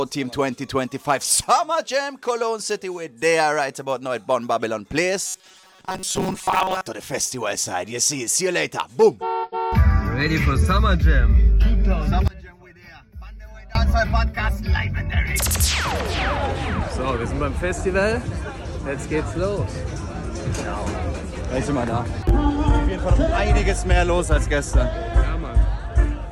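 Robotic sound from repeated short buffers runs from 5.26 to 6.86 s. The audio hardens into a rigid, metallic buzz pitched at 188 Hz that still follows the shape of the sound underneath. The likely cause is that new audio stopped arriving in time, so playback kept looping the last fragment, roughly 5.3 ms long, which fixes that pitch. For most of this stretch the real audio is skipped and replaced by those repeats.

One channel inverted affects 12.28 to 13.75 s. The sound suddenly drops by about 22 dB. This is likely one stereo channel flipped in polarity, so when the two channels are mixed to mono, everything they share cancels. Only the small difference between the left and right channels survives, which leaves this faint, weakened copy until the level returns.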